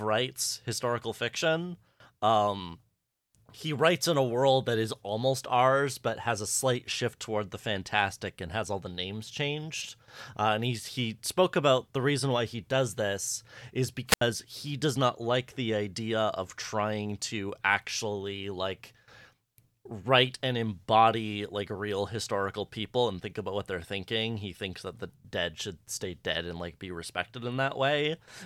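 At 14.07 s, right after "he does this is", the speech suffers a wireless microphone squelch dropout lasting until 14.22 s: the analogue FM link weakens, the receiver's noise floor surges as a short burst of hiss, then the squelch gate shuts the output for roughly 77 ms before the voice resumes on "he does not like". On a spectrogram, a broadband noise smear precedes a blank vertical gap; the waveform shows a flat, near-zero stretch.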